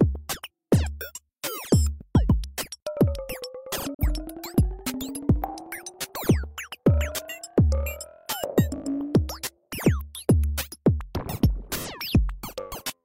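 At 3.94 s the sound drops abruptly to silence, with a fade of only about 3 ms, and stays muted until 4.03 s, when it resumes mid-stream. This brief hole is a digital broadcast dropout. The receiver stopped getting decodable data for a moment, whether from signal loss or a frame failing its checksum, and muted its output rather than play corrupt audio. About 43 ms of programme is missing, consistent with a single lost frame.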